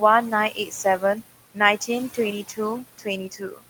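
A short speech recording runs through a noise suppressor for its whole length, and the processing is audible throughout as noise suppressor artifacts. The room noise underneath, sitting about 16 dB below the speech, is pulled down by about 17 dB in the gaps and then rises again beneath each phrase. That frame-by-frame gain decision on every band is what makes the background sink and swell with the speech. The second fault is speech cut by the noise suppressor, where the suppressor mistakes low-level parts of the speech for noise and turns them down along with the background. This happens between 0.51 and 1.17 s, where roughly 150 ms of material drops by up to about 11 dB; again from 2.98 to 3.07 s, down by about 14 dB; and from 3.31 to 3.62 s, where around 200 ms falls by as much as about 17 dB. In those spans the affected speech comes across swallowed or faint.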